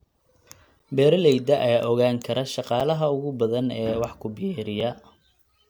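Short hard-edged dropouts to silence interrupt the speech at 0.79 s, 2.80 s after "ogaan kara" and 4.80 s after "wax ku". They are gaps between stream segments, about 3 to 9 ms each, repeating every 2 s.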